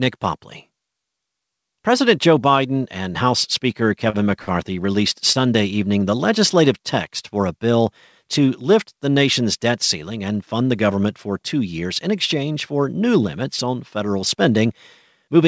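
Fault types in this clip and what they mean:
Short stall from a late packet: late packets emptied the jitter buffer, so the last sound was held for 29 to 46 ms, three times, with nothing lost.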